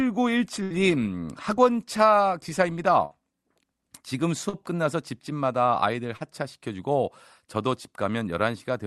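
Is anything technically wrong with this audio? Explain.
Yes, the speech has two kinds of dropout. A burst of packet loss at 0.63–0.73 s and 3.05–3.13 s drops about 60 ms each. The receiver continues the last sound as a fading buzz or hiss, which shows as smeared, decaying harmonics before the speech resumes further on. Short concealed packet loss at 4.49–4.55 s and 6.17–6.22 s loses about 40 ms each. The receiver synthesizes a fill there, heard as a brief smear or wobble, with a blurred spectrogram patch.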